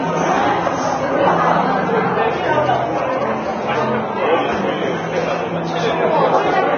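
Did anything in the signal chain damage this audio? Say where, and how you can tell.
Yes, two stages left marks. Throughout the clip there is nothing above 6.5 kHz, and the treble that remains sounds hissy and grainy, with tonal parts roughened and onsets smeared. This is likely heavy Vorbis compression at the codec stage. The encoder pulled the cut-off down and quantised the upper residue so coarsely that fine detail turned into noise of similar energy, which fits a low bitrate around 19 kbps. Unlike a plain low-pass filter, it adds grain rather than just dulling the sound.

From 3.49 to 4.44 s a hard, raspy buzz sits about 31 dB below the signal. Its fundamental is 217 Hz with a dense stack of harmonics, and it holds steady for that whole stretch. This is GSM phone buzz entering the analogue wiring. A nearby 2G phone on a call transmits in bursts 217 times a second, and the audio circuitry rectifies those radio pulses into the signal. 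Mains hum would sit at 50 or 60 Hz and run through the entire clip, not a single bounded stretch.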